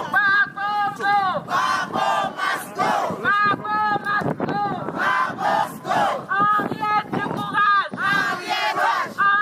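Short bursts of damaged data in a compressed stream occur at 0.95 to 0.98 s, at 5.62 s, and at 8.71 to 8.73 s. Corrupted bytes make the decoder misread frames and lose sync until the next valid header, giving brief disruptions lasting about 14 to 22 ms.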